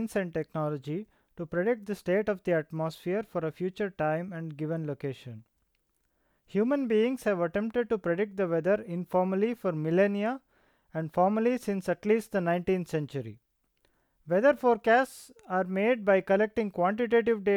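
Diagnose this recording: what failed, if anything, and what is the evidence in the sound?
No failure detected in this recording.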